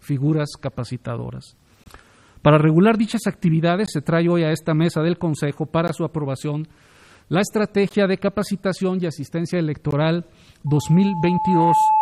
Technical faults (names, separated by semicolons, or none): gap at a join of encoded pieces; loudspeaker feedback squeal